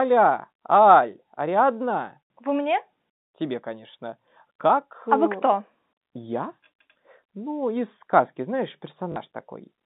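At 9.12 s, running to 9.16 s, there is a short burst of packet loss with the last packet repeated. About 40 ms of audio never arrived, and the receiver filled the gap by replaying the final good block, which fits two lost 20 ms packets. The speech briefly takes on a robotic, stuttering buzz before the narrowband G.711 telephone signal resumes.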